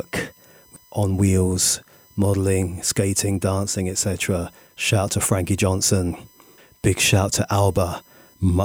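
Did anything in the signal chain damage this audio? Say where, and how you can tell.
Yes. USB whine entered through the power or ground: 1 ms bus-frame current adds a steady 1 kHz harmonic series, peaking at 15 kHz, about 35 dB under the speech, visible as unbroken horizontal spectrogram lines.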